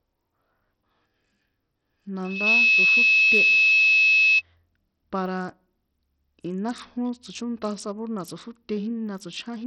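From the start the whole speech track has a gritty, smeared top end, with treble flickering in and out. That's heavy Bluetooth SBC compression, likely starved of bits, which fits roughly a 64 kbps link. The upper sub-bands get too few bits, so quantisation noise and aliasing ride on everything.

At 2.24 s a loudspeaker feedback squeal kicks in: a single 2.6 kHz tone swells over a fraction of a second to about 15 dB above the speech and holds until 4.42 s. The mic was hearing its own speaker, and the loop gain at that frequency climbed past one.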